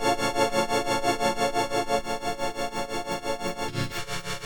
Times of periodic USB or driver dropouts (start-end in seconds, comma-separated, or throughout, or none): 0.50-3.50